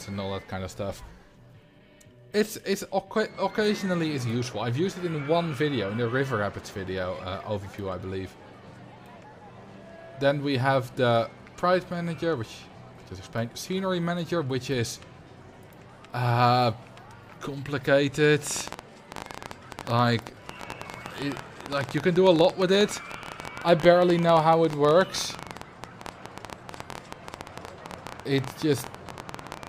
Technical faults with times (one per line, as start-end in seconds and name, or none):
18.47-29.68 train of clicks